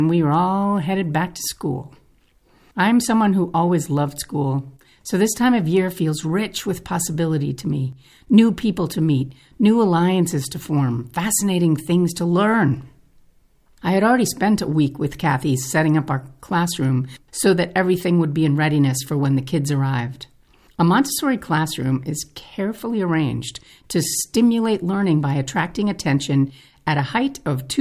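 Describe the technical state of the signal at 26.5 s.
At 26.5 s the speech signal is intact, with no fault present at that moment.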